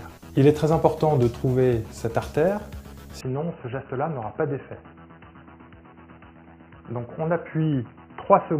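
At 3.21 s the sound abruptly turns dull and boxy. Nothing above 3 kHz remains. The level drops a few decibels, and a faint new background noise appears. There is no gap at the change. The input likely switched to a poorer device, and it stays that way to the end.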